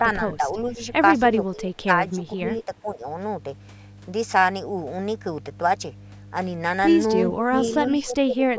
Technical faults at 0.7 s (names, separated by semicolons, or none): mains hum; speech suppressed in double talk